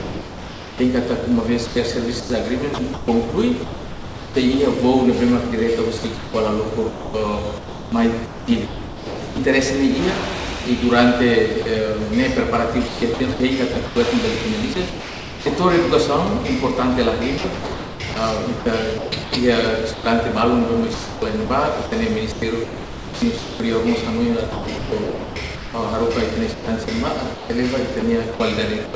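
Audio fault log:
0.00–0.80 s and 11.62–11.66 s: sound dropped by the voice detector. The sound gives way to steady synthetic hiss, likely because the sender judged it background and sent comfort noise instead.
1.66–4.36 s, 5.98–9.38 s, 12.88–15.46 s, 17.38–20.06 s, 20.94–23.60 s, 24.52–28.94 s: sound chopped by the voice detector. The sound has repeated holes filled with comfort noise, likely from the detector repeatedly switching transmission off and on.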